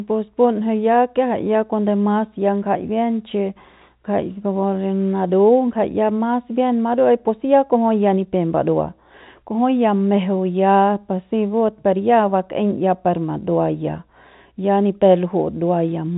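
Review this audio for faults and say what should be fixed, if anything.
Nothing in this audio needs to be fixed, as the review finds no faults.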